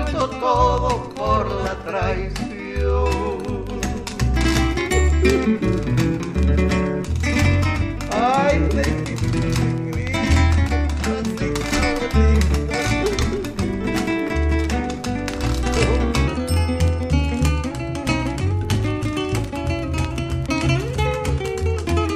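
A section at the wrong speed runs from 16.28 s to the end at 22.15 s, where the audio suddenly plays 1.15 times faster, raising pitch by about two semitones and hurrying its pace. The likely cause is playback or editing against a mismatched clock.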